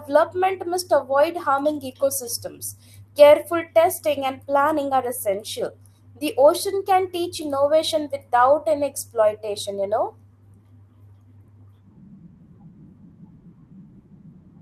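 From the start to the end of the speech there is clock drift between sender and receiver. The sending side's clock runs slow by roughly 3 percent, so audio arrives a little slower than it is played out and the receiver's jitter buffer keeps draining. The sound has a faintly dragging, unsteady pace rather than a clean break. On a waveform, the envelope looks slightly stretched in time against the natural rhythm.

From 0.02 s to 13.88 s the receiver makes repeated timing corrections to stay in step with that slow sender. It keeps repeating short slices of audio, and together these add about 400 ms, so the stretch plays at about 97 percent speed. Each repeat is small, heard, if at all, as a slight hiccup or stutter, all pushing the same way but unevenly spaced. A spectrogram shows brief duplicated frames where harmonics and formant bands jump back and repeat, with faint vertical seams at the joins.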